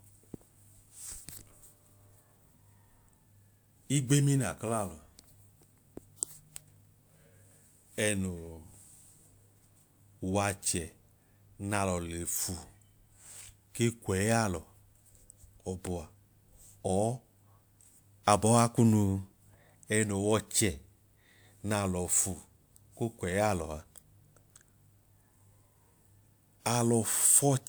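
No technical faults are audible anywhere here.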